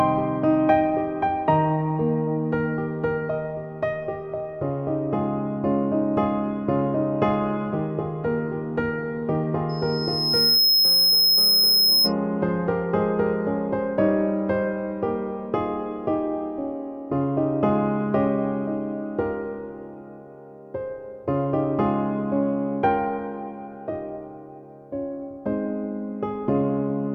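At 9.69 s a loudspeaker feedback squeal kicks in: a thin, piercing tone at 5.2 kHz that swells over roughly a second until it sits a few dB above the rest of the sound, then cuts off at 12.13 s. The mic was hearing its own speaker, and at that one frequency the loop gain went past unity, so the tone kept feeding itself until the loop was broken.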